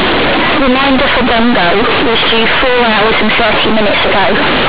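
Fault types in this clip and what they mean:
Companded audio read as linear: the speech is very loud and harshly buzzy throughout, with heavy noise in the pauses. The A-law bytes are played as plain 8-bit samples without expansion, so each sign change swings half the range and quiet passages match loud ones.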